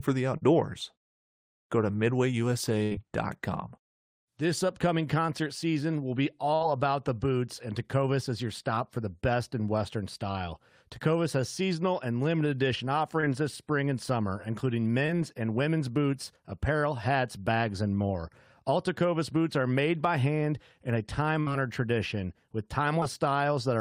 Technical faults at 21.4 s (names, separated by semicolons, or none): burst of packet loss